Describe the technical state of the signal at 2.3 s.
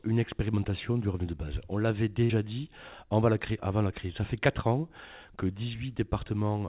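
At 2.3 s the stream is in a burst of packet loss running from 2.24 to 2.31 s. Packets went missing or arrived too late, so the receiver covered about 54 ms by extending the last sound it had and fading it out, heard as a held buzz or a dying hiss depending on what came before. When playback resumes, about 60 ms of audio has been skipped. Like the rest of the call, this passage has nothing above 4 kHz.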